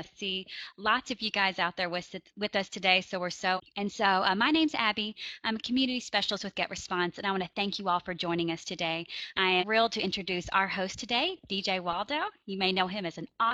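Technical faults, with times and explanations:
3.53–3.60 s and 9.57–9.64 s, damaged data in the compressed stream: corrupted bytes make the decoder misread frames and lose sync, leaving a short chirp, squawk, click or hole of about 70 ms each.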